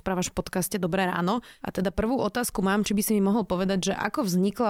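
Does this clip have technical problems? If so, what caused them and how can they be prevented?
No, nothing in this speech recording stood out as a technical problem on listening, so there is nothing to trace to a cause or to prevent.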